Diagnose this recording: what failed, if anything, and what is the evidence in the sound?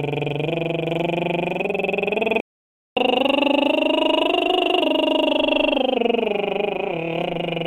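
The music cuts out abruptly at 2.40 s and stays silent until 2.97 s, a gap of about 0.56 s, before resuming at the point where it stopped. That is a playback stall at the playback stage. The most likely cause is the player's buffer running dry or its output thread being held up, so no samples reached the output for over half a second.

From 2.97 s to 5.97 s the music runs audibly fast and sharp, at 1.1 times normal speed with the pitch raised by around one and a half semitones, then settles back to normal. This is catch-up at higher speed, also in the playback stage. Having fallen behind during the stall, the player resamples its backlog so it plays faster, shifting tempo and pitch together for three seconds to recover some of the lost time.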